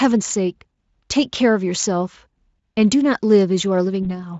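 Speech, with one VoIP packet loss concealed by the speech codec near the end: about 20 ms of audio drops out around 4.03 s, the decoder stretches it into a brief fading buzz or coloured noise, and the voice stays weak or distorted until roughly 4.19 s. The Speex coding itself shows little or no damage of its own, which points to a fairly high-quality setting.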